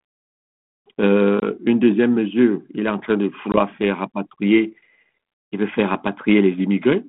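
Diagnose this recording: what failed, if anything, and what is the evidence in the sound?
Network stage: packet loss on an ADPCM call. Hard-edged silent gaps of about 20 ms sit at 1.40 s and 3.52 s, each about one packet. The ADPCM decoder's predictor and step size then fall out of step with the sender's, so speech briefly returns slightly distorted.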